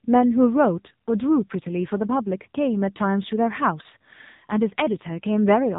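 From start to finish the speech has passed through the AMR narrowband mobile codec at a low rate, which fits roughly 6.7 kbps. The 8 kHz sampling removes everything above 4 kHz, and the sparse pulse excitation leaves heavy damage: a muffled, buzzy, synthetic-sounding voice.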